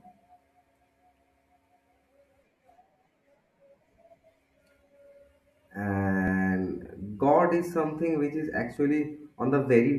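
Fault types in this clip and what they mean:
Audio missing between chunks: in this speech you get two tiny skips, at 6.28 s and 8.77 s, about 2.5 s apart, where a sliver of a few milliseconds just vanishes and the sound on either side butts straight together with no gap of silence. That regular spacing is the giveaway. It's likely a recorder or processor handling the audio in 2.5-second blocks and dropping a bit each time it hands over from one block to the next.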